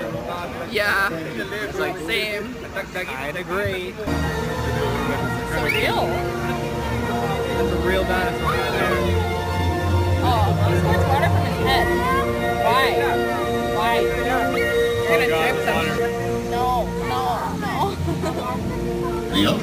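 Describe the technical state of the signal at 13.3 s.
At 13.3 s, as throughout, crude rate conversion repeats samples without filtering, consistent with a 32 kHz to 44.1 kHz change. This causes an inharmonic fizz that tracks loud, high sound, unlike harmonic clipping.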